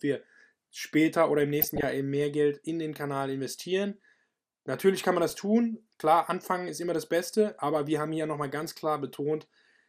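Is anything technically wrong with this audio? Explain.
Yes. Throughout the speech there is plainly audible MP2 compression damage: a dull top end with granular, gurgling distortion. This is likely from MPEG Layer II coding at a low bitrate, which fits roughly 80 kbps. Upper sub-bands drop out and the remaining bands are coarsely quantised.

There are two bursts of DAB burbling. The first runs from 1.61 to 1.85 s, just after "wir später oder im" and before "eben mehr". The second runs from 5.29 to 5.37 s, after "kann man". Uncorrected bit errors, at a low error rate well under one percent, corrupt samples in the coded audio. This gives short blips of noise in single sub-bands.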